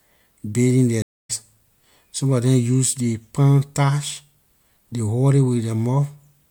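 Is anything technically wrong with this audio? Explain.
Yes. From 1.02 to 1.31 s there is a stream reconnect. The speech goes silent for 220 ms, then resumes about a fifth of a second further on, as a restarted decoder picks up the live stream. Unlike a plain dropout, that stretch of speech is skipped rather than merely paused.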